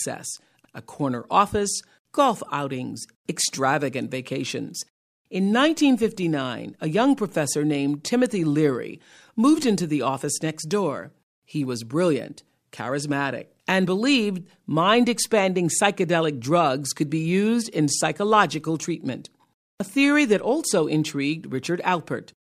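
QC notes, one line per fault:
No faults heard anywhere in this speech recording.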